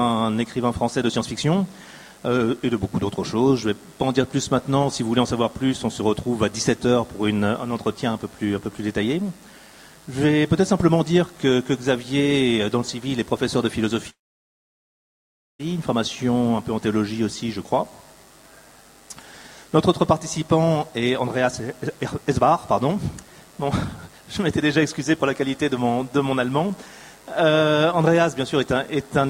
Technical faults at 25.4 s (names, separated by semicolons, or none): none